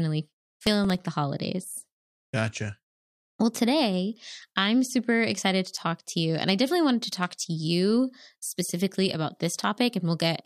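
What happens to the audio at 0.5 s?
Processor overload crackle runs from 0.41 to 1.02 s, before "the holidays": the processor misses about fifteen short buffers (around 3 ms each), and the repeated stale audio grates as gritty tearing.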